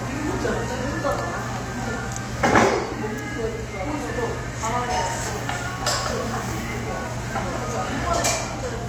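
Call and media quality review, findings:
No faults found; audio path nominal across the full clip, nothing to escalate.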